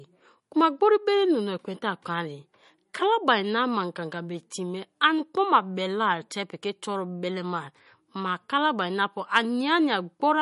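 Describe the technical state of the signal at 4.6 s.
At 4.6 s, as throughout the clip, the speech carries plainly audible MP3 compression damage, likely from a low bitrate near 40 kbps: nothing above 11.1 kHz, with watery, swirling artefacts.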